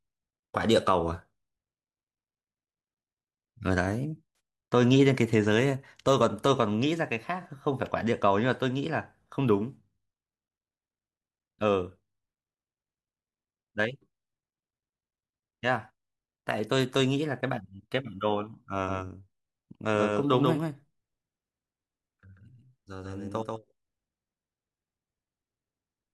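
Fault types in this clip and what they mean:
AAC frame loss with concealment: two brief smeared, phasey patches, 64 ms and 43 ms long, where missing frames were filled from earlier spectrum rather than left silent.
doubled audio track: from 18.9 s on, a dry, slightly quieter copy trails around 150 ms behind without echo decay, likely from a second capture path.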